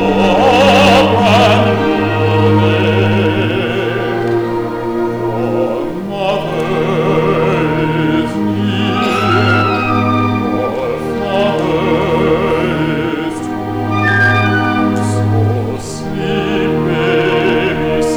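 All the way through, the audio runs into hard clipping. It's driven about 12 dB past what the stage can pass, so peaks get sliced flat, around 2 percent of samples. Those flat tops throw off high harmonics, giving crackle on the peaks.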